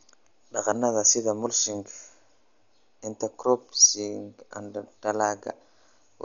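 Throughout the speech, nothing is present above about 6.9 kHz, and tones carry a rough, fluttering noise. This is likely Dolby Digital compression at a starved bitrate, consistent with roughly 48 kbps: the encoder narrowed the band and left many lines unfilled, and the decoder filled them with dither noise.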